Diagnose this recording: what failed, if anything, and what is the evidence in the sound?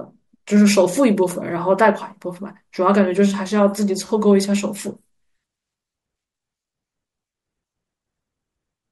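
Nothing in this speech recording points to a failure at any stage, so there's no fault to diagnose and no evidence to chase.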